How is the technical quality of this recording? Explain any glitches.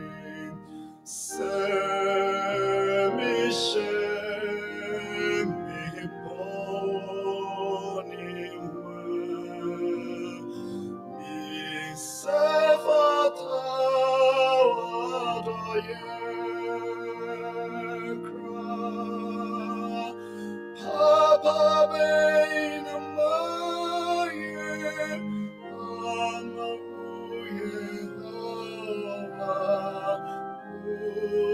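The technical quality is compromised by a noise suppressor built for speech that stays active for the whole recording. It misreads sustained tones, ambience and reverberant tails as background noise and keeps pulling them down, while sharp onsets mostly pass. The gain it removes swings by about 10 dB, so the sound pumps and flutters, held material thins out, and decays vanish sooner than they naturally would.

The clearest instances of sound cut by the noise suppressor fall at 0.58–1.06 s, 6.1–6.25 s, 8.06–9.56 s, 10.39–11.26 s, 18.16–18.64 s, 20.1–20.84 s, 25.5–29.39 s and 30.63–30.87 s. In each, the suppressor classed the sustained or fading part of the sound as noise and attenuated it harder, by about 4 to 6 dB at the deepest. The level sags or the tail is clipped short, while attacks mostly come through. The longest stretch, near 25.5–29.4 s, is affected for around three seconds.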